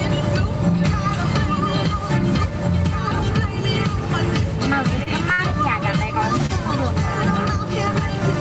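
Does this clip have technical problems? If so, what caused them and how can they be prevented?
Yes. Gain pumping runs through the whole clip, likely because the input gain is set far too high and a fast limiter clamps down on every loud sound. The gain swings by roughly 5 dB, flattening the dynamics. Lowering the input gain and easing the limiter would prevent it.

Short stalls from a late packet occur at 5.03 to 5.08 s, 5.32 to 5.40 s and 6.46 to 6.51 s. Each time, the jitter buffer ran empty, so the receiver held the last sound for 28, 61 and 28 ms until the packet arrived, with nothing lost. A larger or more adaptive jitter buffer, or a steadier network connection, would prevent these.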